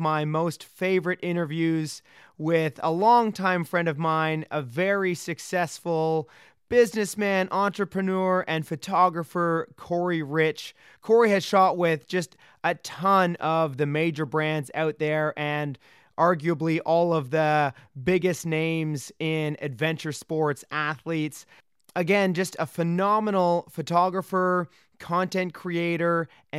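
Nothing stood out as a technical fault on listening to the recording.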